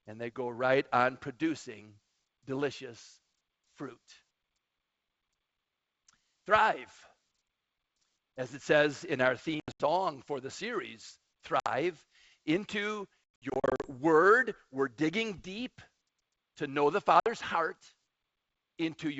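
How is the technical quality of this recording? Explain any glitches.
The recording has four dropouts from packet loss on an ADPCM call, at 9.60 to 9.83 s, 11.60 to 11.67 s, 13.39 to 13.89 s and 17.20 to 17.30 s. Lost packets were replaced with silence, and the receiving decoder's adaptive predictor and step size drifted away from the sender's. That produces abrupt, hard-edged gaps in the speech, each followed by slight distortion for some tens of milliseconds until the decoder resynchronises.

The first event loses 160 ms scattered across 200 ms, with runs of up to 80 ms. The second and fourth each lose 60 ms. The worst, around 13.4 s, loses 340 ms across 600 ms, with runs of up to 100 ms, so it sounds like stuttering holes. Between the dropouts, the G.722 wideband coding sounds consistent with its full rate, extending to about 7 kHz with at most a faint upper-band hiss.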